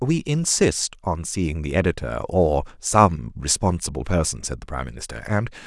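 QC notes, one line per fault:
No faults heard anywhere in this speech clip.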